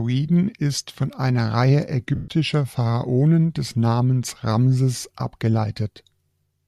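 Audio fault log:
2.15 to 2.28 s: lost LE Audio frames. For about 130 ms the decoder recycles the last spectrum with randomised signs, so the speech smears into noise and fades toward silence.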